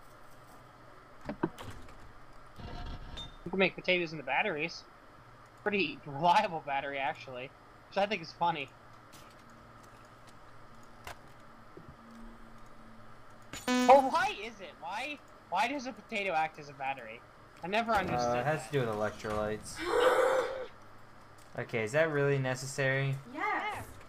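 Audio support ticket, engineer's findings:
No audible faults found.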